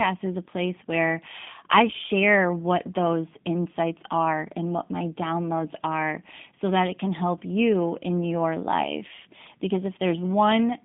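Speech running through a G.729 codec for its whole length, with plainly audible coding damage. The sound is rebuilt from a vocal-tract filter, pitch predictor and sparse pulses, giving a rough, synthetic edge that fits an 8 kbit/s G.729A link. The band sits at 200 Hz to 3.6 kHz, with nothing above 3.7 kHz.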